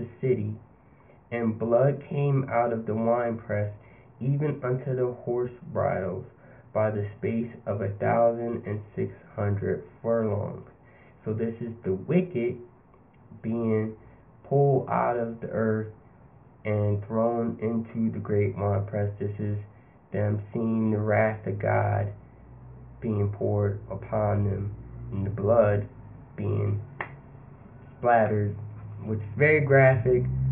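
No technical faults are audible.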